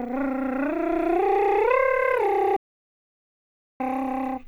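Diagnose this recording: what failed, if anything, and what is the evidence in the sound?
The music cuts dead at 2.57 s and comes back at 3.80 s, so about 1.23 s is simply gone, with silence and no room tone in the gap. That's an audio dropout to silence, likely an input or link loss upstream while the recorder kept writing silence.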